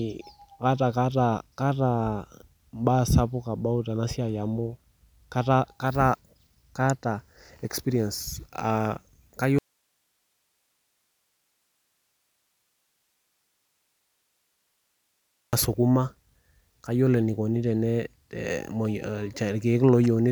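Speech with an audio dropout to a faint residue from 9.59 to 15.53 s: the waveform abruptly flattens to broadband hiss about 50 dB down, likely from a lost input.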